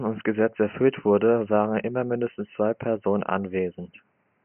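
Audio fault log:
The speech signal holds steady with no dropouts, distortion or timing disturbances, and the faint room noise of the recording space sits about 47 dB below the speech.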